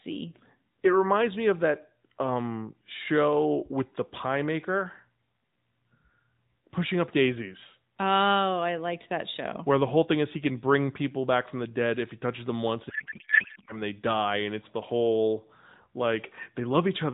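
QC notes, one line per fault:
12.90–13.81 s, codec payload misread: just after "touches them once and", the speech gives way to garbled noise and warble that barely tracks it, until "they die and it's". The character fits octet-aligned AMR payloads being unpacked as bandwidth-efficient, so the decoder reads well-formed frames with every parameter field shifted and synthesises nonsense from them. Around it, the AMR-NB path has a light narrowband coding character that points to the 12.2 kbps mode.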